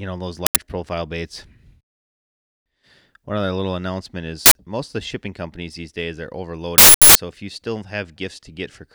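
A speech recording carries three uninitialised buffer faults, each a loud burst of digital noise replacing the signal: 0.46 to 0.56 s, 4.46 to 4.55 s, and a longer one from 6.78 to 7.15 s. The first two each last about 93 ms, which fits a 4096-sample block; the third runs about 372 ms, fitting a 16384-sample block. In each case the block was played out before audio was written into it, so stale memory contents were reproduced as samples.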